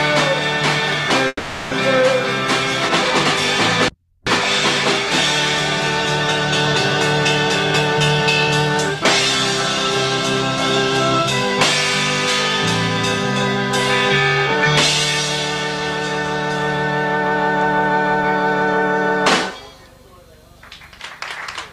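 The audio breaks up at 1.27 s and recovers at 1.73 s. For about 440 ms the last sound is stretched into a fading buzzy fill, then roughly 20 ms of silence follows before the audio resumes with that stretch missing, likely a long network dropout.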